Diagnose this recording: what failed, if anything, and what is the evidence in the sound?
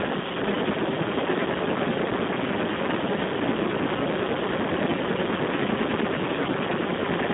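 Codec stage: heavy Speex codec damage throughout. Speech sounds hoarse and noisy, confined to 150 Hz–3.5 kHz, nothing above 3.8 kHz. This fits roughly 4 kbps, starving the excitation.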